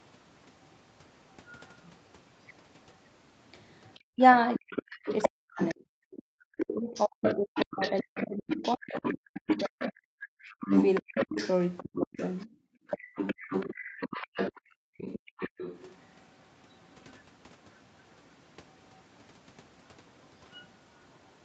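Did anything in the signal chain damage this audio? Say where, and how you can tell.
Yes, and it all comes from the call processing stage, around the echo canceller. First, the other side's voice leaking through. A second voice sits under the talker in three stretches. From 0.65 to 1.98 s it's very faint, well down in the background. From 3.91 to 19.01 s it's nearly as loud as the main talker. From 20.24 s to the end it's faint again. The likely cause is loudspeaker playback reaching the mic that the canceller didn't fully subtract.

Second, speech suppressed in double talk. Between 4.15 and 12.48 s, while that second voice is going, the main talker keeps dipping and breaking up. The pieces add up to roughly 5 s, and the worst drops are something like 40 dB deep. There's a shorter bout between 13.66 and 15.38 s, about half a second in total. The canceller probably couldn't tell near-end speech from echo during overlap, so it ducked both.

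Third, background gated by the echo canceller. The room tone drops out abruptly twice. The first is between 12.48 and 13.15 s, about 30 dB down for roughly half a second. The second is from 14.62 to 14.98 s, about 40 dB down. In both, the canceller clamped the mic hard while the loudspeaker was active, so the ambience vanishes and then pops back when it releases. That on-off room noise is the tell.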